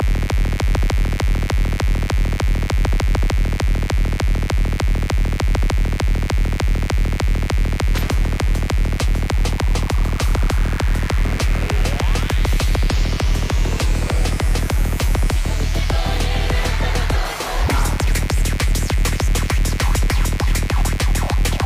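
From the very start to the end there's a mains buzz, a steady raspy edge sitting roughly 15 dB under the sound. Sharp switching spikes from a dimmer or rectifier, or a missing shield, are getting in twice per 50 Hz cycle, stacking harmonics up into several kHz.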